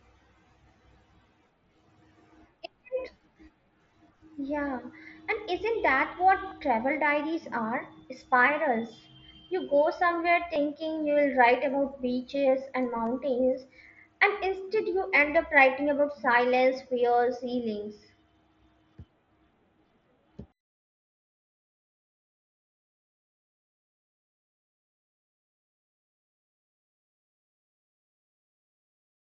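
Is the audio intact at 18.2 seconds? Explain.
Yes, at 18.2 seconds the speech is intact, with no fault at that moment beyond the ordinary wideband character of the Bluetooth mSBC headset link it passes through.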